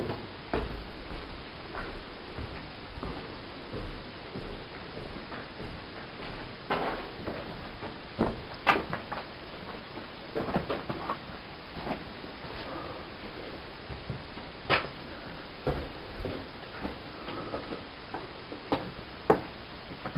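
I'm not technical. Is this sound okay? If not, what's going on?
Yes, nothing in it points to a technical fault; it's fine as far as playback goes.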